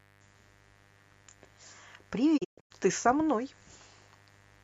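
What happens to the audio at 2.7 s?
The sound is just coming back from a digital broadcast dropout that runs from 2.36 to 2.72 s. The receiver stopped getting decodable frames and muted until clean ones arrived, so roughly a quarter of a second of audio is lost in several short holes spread over about 0.32 s, the longest about 0.13 s. The hole sizes point to a handful of frames of around 32 ms each. Each gap fades in and out over about 20 ms, so it sounds like quick stuttering silences rather than hard clicks. On a waveform these are flat silent stretches with short tapered edges. On a spectrogram they show as vertical blank bands cutting through everything.

Under this, and through the whole clip, runs a mains buzz from a 50 Hz supply. It sits well below the speech, about 35 dB down. Sharp switching spikes, two per mains cycle, produce a steady raspy buzz rather than a smooth hum. A spectrogram shows it as a comb of thin horizontal lines at 50 Hz multiples climbing into the kilohertz range. 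The waveform carries small regular spikes every 10 ms, and these persist inside the dropout's muted gaps only if the buzz entered after the receiver.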